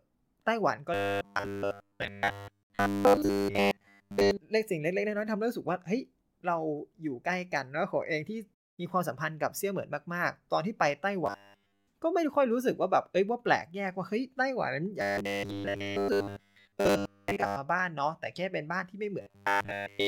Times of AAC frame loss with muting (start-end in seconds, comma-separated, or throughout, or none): none